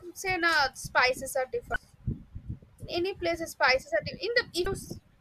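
At 1.73 to 1.76 s, right after "say na spices are", and again at 4.63 to 4.66 s, the speech breaks into a brief glitch from damaged data in a compressed stream. Corrupted bytes make the decoder misread those frames and lose sync until it finds a valid frame header. On a spectrogram each event is a short vertical disruption. The waveform shows an abrupt discontinuity about 30 ms wide.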